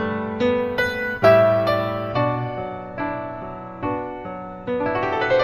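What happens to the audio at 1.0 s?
At 1.0 s the audio is inside a stretch of imaging from linear upsampling, from 0.60 to 2.10 s. Straight-line interpolation upward, which fits a 16 kHz source raised to 48 kHz, leaves faint mirror images in the 8 kHz to 16 kHz range, roughly 35 dB down, heard as a light metallic shimmer. Unlike aliasing, these images sit above the dulled top of the band rather than folding back into it.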